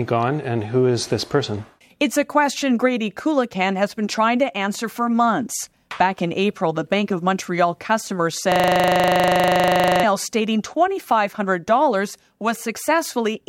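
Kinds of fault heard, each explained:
System hang loop: from about 8.52 s to 10.04 s the speech stops moving forward and a single 40 ms slice of audio plays again and again, 38 times in all, while the host or driver is frozen and the output hardware keeps cycling one stretch of its ring buffer. Repeating at 25 Hz, it sounds like a rapid mechanical stutter, a fixed pattern that returns identically each cycle. A dropout leaves silence and a jittery glitch varies, but here every repeat is an exact copy, which points to a 40 ms buffer.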